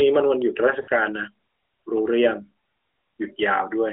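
From 0.82 to 0.90 s, lost AMR speech frames: the decoder held the last good pitch and vocal tract settings at falling gain, so the speech smears and fades for a moment, about 60 ms, fitting three 20 ms frames. On a spectrogram, harmonics stretch flat and dim within the narrowband 3.5 kHz ceiling. The waveform envelope sags, then recovers.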